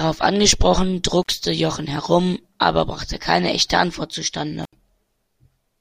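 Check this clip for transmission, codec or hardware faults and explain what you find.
One hardware fault recurs: intermittent contact, at 1.22–1.30 s and 4.63–4.73 s. A loose connection opens for about 53 ms and 74 ms, dropping the speech to faint hiss, with crackle at each break.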